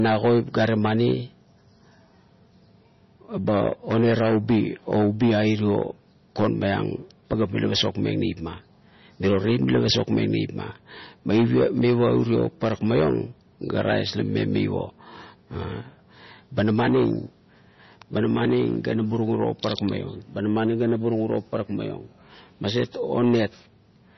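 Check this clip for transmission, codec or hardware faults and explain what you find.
MP3 compression throughout the speech: treble stops sharply near 5.9 kHz and weak frequency lines flicker between frames, giving watery, swirly sibilants, which fits a low bitrate, likely around 24 kbps.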